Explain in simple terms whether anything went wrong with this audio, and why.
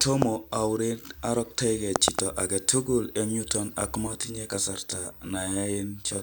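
Channel delay (comb filtering) starts at 4.07 s, right after "agetukul en yuton ako", and runs to the end. One channel arrives around 20 milliseconds late, and mixing the two cancels evenly spaced frequencies, leaving the speech rough and slightly doubled.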